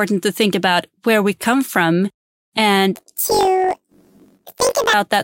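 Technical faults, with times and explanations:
2.95–4.94 s: planar audio read as interleaved. The speech jumps an octave high with a rapid flutter near 47 Hz but keeps its normal pace. Each 21.33 ms block, consistent with 1024 samples, stores left then right but is read as alternating pairs, playing twice at double speed.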